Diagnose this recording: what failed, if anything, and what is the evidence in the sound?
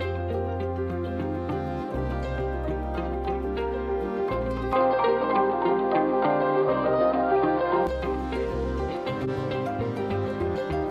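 From 4.73 to 7.87 s the sound turns dull. Nothing reaches above 4.9 kHz. The level shifts by roughly 5 dB, and a faint new noise floor sits about 40 dB down. No gap marks the change. The likely cause is an input switched to a poorer device, at the driver stage.

From 9.24 to 9.29 s a brief glitch peaks near -25 dBFS. Its length fits one damaged codec frame. This is a corrupt frame decoded. Flipped bits gave wrong gains or codes. The decoder played them anyway, putting energy at the wrong frequencies.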